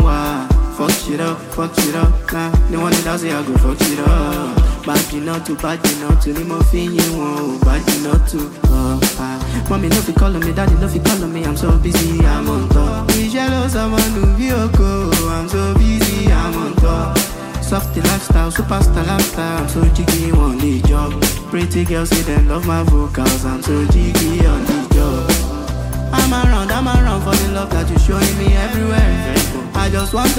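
Nothing goes wrong anywhere in this audio; there's no glitch, dropout or hiccup to point to at any moment.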